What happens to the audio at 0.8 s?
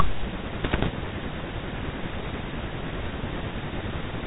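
At 0.8 s the clip is inside a run of bit errors on an ADPCM link lasting from 0.64 to 0.88 s. Bits in the coded stream are being corrupted, at a rate of a percent or two. Each one knocks the decoder's adaptive step size and predictor off track, so the error keeps ringing for a few milliseconds. The speech there breaks into pops and short rough bursts with abrupt jumps in level, over a narrow telephone band consistent with a 32 kbit/s G.726 link.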